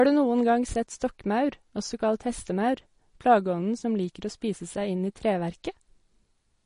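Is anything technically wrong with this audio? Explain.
Yes. Throughout the speech there is plainly audible damage from MP3 compression, likely from an encoder starved of bits, which fits a bitrate around 40 kbps. With so few bits, the encoder cuts the treble outright, leaving nothing above 10.6 kHz, and discards weaker frequency lines. These lines drop in and out from one frame to the next, so the speech sounds dull at the top and carries a watery, swirling texture with smeared attacks.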